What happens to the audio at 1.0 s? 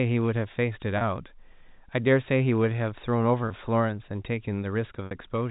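At 0.98 to 1.01 s there is packet loss with pitch repetition. About 30 ms of audio went missing, which fits three 10 ms packets, and the receiver filled the gap by looping the last pitch period. It sounds like a slightly held, buzzy note. On the waveform, identical cycles repeat and begin to taper. On the spectrogram, the harmonics run flat and unchanging before the speech resumes, all below the 4 kHz ceiling of the telephone band.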